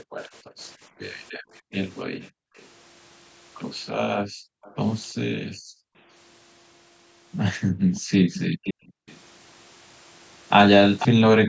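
Background gated by the echo canceller, 0.03 to 2.56 s: while the far end's loudspeaker was active, the canceller clamped the microphone, so the room tone sinks by up to about 40 dB for roughly a second in total before recovering. The same gating returns at 4.21 to 5.97 s, at 7.72 to 9.07 s for somewhat less, and briefly from 11.11 s to the end.

Echo leak, 1.72 to 2.68 s and 4.63 to 4.76 s: a faint delayed copy of the speech trails by 350 ms, far beneath the main signal, likely residue the canceller failed to subtract from a loudspeaker feeding the microphone. From 7.94 to 9.2 s and 10.99 to 11.08 s the delay stretches to 490 ms and the copy grows much louder, sitting not far under the speech itself.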